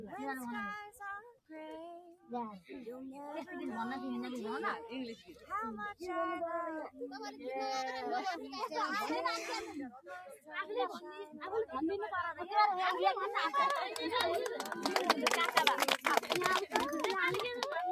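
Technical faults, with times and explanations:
Throughout: noise suppressor applied to music or sounds. Steady, sustained parts of the sound and their decaying tails swell and sink by around 5 dB, so the level pumps and the ambience thins, while sharp onsets pass mostly untouched. A suppressor tuned for speech treats anything that holds steady or fades as noise and keeps pulling its gain down and releasing it, which produces this restless breathing in the background.
1.33–1.51 s, 2.14–2.30 s, 5.18–5.50 s, 9.96–10.53 s and 11.25–11.43 s: sound cut by the noise suppressor. At each of these points the sound suddenly hollows out or its tail is clipped short for roughly 150 to 400 ms, dropping by about 19, 13, 10, 14 and 10 dB. The suppressor judged these stretches to be noise and clamped its gain hard, so the sound ducks away before returning.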